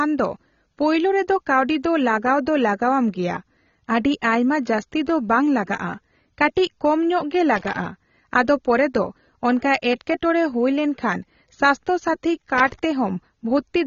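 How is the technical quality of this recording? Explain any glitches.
The technical quality is compromised by plainly audible low-bitrate coding and two bursts of connector noise.

Throughout, the speech sounds dull and smeared, with a watery, fizzy edge on sibilants. Nothing survives above 7 kHz. That points to AAC compression, likely AAC-LC at a low bitrate around 24 kbps, which coarsely quantises and drops high bands. A spectrogram shows a hard ceiling at 7 kHz.

From 7.56 to 7.86 s and again from 12.58 to 12.79 s there is irregular scratching, a loose connector crackle. A dirty or worn contact briefly breaks and remakes the circuit, chopping the signal. The waveform shows spiky, broken stretches, and the spectrogram shows broadband vertical streaks.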